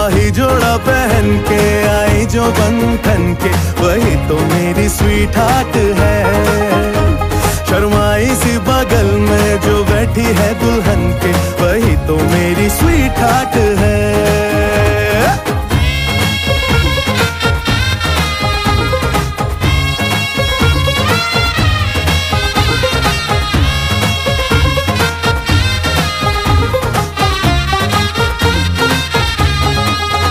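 A sudden voltage pulse, likely from a plug being seated, a switch, a static discharge or a driver glitch, entered the signal path of this audio at 17.93 to 17.95 s. It is heard as a single loud pop, peaking around 10 dB above the surrounding level, while the sound continues underneath.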